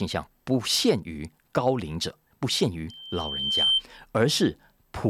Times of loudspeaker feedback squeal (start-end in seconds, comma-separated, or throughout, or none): 2.89-3.83